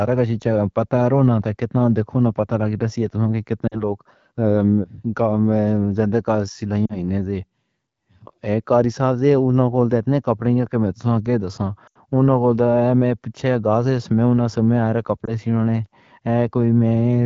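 Lost AMR speech frames cause dropouts at 3.68 to 3.82 s, 6.86 to 6.97 s, 11.87 to 11.97 s and 15.25 to 15.32 s. The decoder repeats its last good settings with falling gain, so the speech smears and dips. The third gap is longest, about 80 ms, fitting four 20 ms frames.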